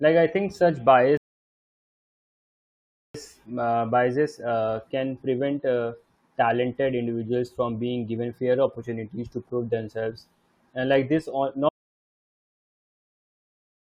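At 1.17 s, just after "like I think such", the speech halts in a rebuffering stall: the player exhausted its downloaded audio and waited for more. Silence runs until 3.14 s, then delivery resumes at exactly the point it left off with "uh biases uh can", so nothing is missing but about 1.97 s is added. A waveform shows a flat, silent stretch, and a spectrogram shows a blank vertical band with the speech energy continuing seamlessly on either side.

From 11.69 s to the end of the clip, the speech cuts out mid-flow in an audio dropout to silence. The gap holds no room tone or hiss at all, only silence, which likely means the input was lost while the recorder went on writing empty samples, so whatever followed is gone. On a waveform the trace collapses abruptly to a flat line, and a spectrogram goes completely black across all frequencies through to the end.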